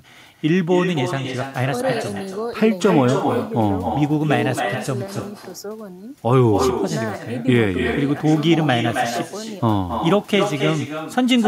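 Echo with no canceller runs through the whole of this speech clip: every phrase returns roughly 300 ms later, about 6 dB quieter and thinner. The far end's loudspeaker is feeding its microphone, and nothing strips that copy before it crosses the network back.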